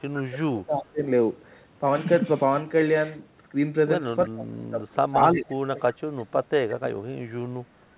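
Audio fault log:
0.00–1.03, 4.27–5.19, 5.35–5.48 and 5.75–6.92 s, speech suppressed in double talk: the voice dips by up to about 25 dB (about 10 dB at 5.35 s) and thins or breaks apart. This is likely an echo canceller ducking its own talker along with the loudspeaker echo while the far side speaks. On the waveform, the envelope pinches in, and the spectrogram shows gapped, fading energy.
0.73–0.84, 5.25–5.54 and 5.80–5.96 s, echo leak: a faint copy of the voice trails the original by 339 ms, at about 25, 15 and 30 dB below the speech. This is likely residual loudspeaker pickup that the far end's canceller missed. On the spectrogram it appears as weak harmonic smears offset from the speech, below the 4 kHz band edge.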